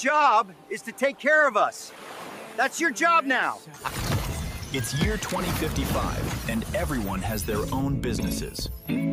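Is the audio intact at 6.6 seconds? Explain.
Yes, at 6.6 seconds the audio is intact, with no dropout, click, distortion or other fault at that point.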